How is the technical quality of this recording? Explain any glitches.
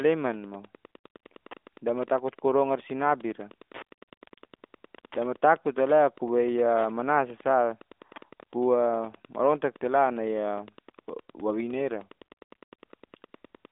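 The recording carries Wi-Fi interference throughout. A nearby Wi-Fi radio's transmissions are rectified by the audio circuit, so its beacon, sent every 102.4 ms, becomes a steady tick nearly ten times a second, sitting well below the speech for the whole 14 seconds. The line itself is narrowband mobile audio, with nothing above 3.8 kHz and only light AMR narrowband codec colouring, consistent with the 12.2 kbps mode.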